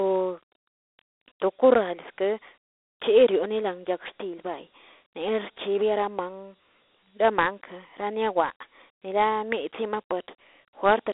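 From start to finish the speech carries Dialogic VOX ADPCM damage, a 4-bit adaptive differential coding whose rate of about 32 kbps fits 8,000 samples a second. Each sample stores only a coarse step from a prediction, so a gritty, plainly audible hiss rides on the speech itself. Unlike a plain telephone filter or μ-law coding, which stay clean, this grit tracks the speech, and it sits inside a 300 Hz to 3.6 kHz band with nothing above 3.8 kHz.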